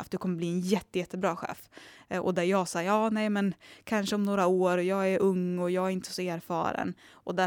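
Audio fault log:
No audible faults detected.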